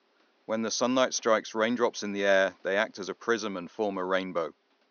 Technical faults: none

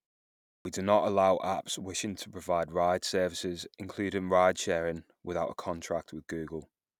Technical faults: clipped start after a pause

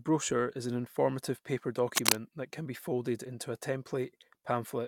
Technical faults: cable scratch noise

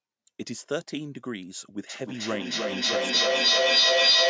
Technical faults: feedback echo between two devices

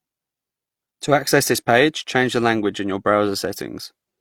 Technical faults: transcoding between lossy codecs

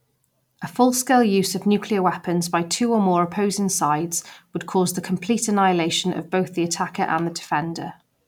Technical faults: none

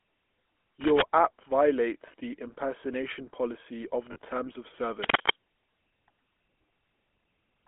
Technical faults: GSM full-rate codec; cable scratch noise; lost GSM frames

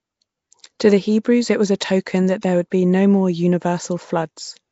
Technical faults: Nellymoser compression

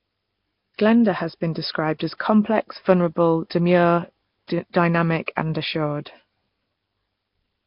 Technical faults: Nellymoser compression; pre-echo

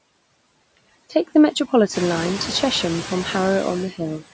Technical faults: noise suppressor artifacts; speech cut by the noise suppressor

